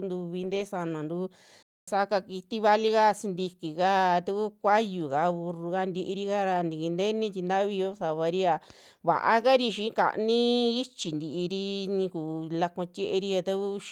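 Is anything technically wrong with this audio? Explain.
Yes. At 0.43 to 0.65 s, 7.91 to 8.01 s and 11.01 to 11.11 s the stream suffered a lost packet rebuilt from error correction: packets went missing, and the decoder substituted the low-bitrate backup copies carried in the following packets. About 120 ms of speech in the first spot and 60 ms in each later spot therefore sounds rougher and noisier, with no actual gap.

From 1.63 to 1.88 s there is a playback stall. The output likely starved of data or had its thread blocked, so the speech cuts out mid-flow for about 0.25 s of silence before resuming with "kiti valika sintikika taku".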